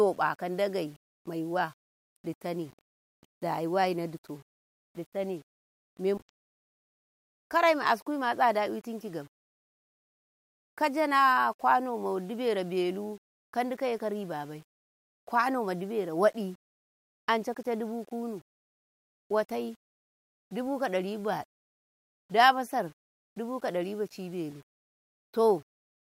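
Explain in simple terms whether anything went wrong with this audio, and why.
Yep, there's a grainy, gritty edge on the speech from start to finish, worst in the quieter moments, where soft sounds break up or sputter. That's likely low bit depth without dither: the audio was rounded down to about 8 bits without dither, so the error follows the speech.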